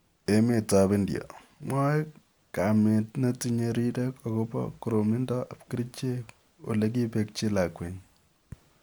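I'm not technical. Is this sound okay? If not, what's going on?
Yes, nothing in this speech recording stands out as a technical fault, so there is nothing here to fix.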